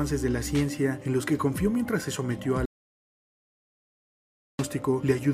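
At 2.66 s the sound cuts off abruptly and stays out until 4.59 s, an audio dropout to silence lasting about 1.94 s. The gap is silent with no room tone or noise floor, which separates it from a fade or a quiet passage. The likely cause is a lost input, such as a disconnected device or a failed link, while the recorder kept writing silence. Whatever happened during those two seconds is gone, and the sound resumes mid-flow.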